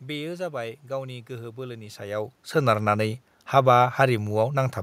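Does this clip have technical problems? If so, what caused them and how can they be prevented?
No, there are no technical problems in this recording.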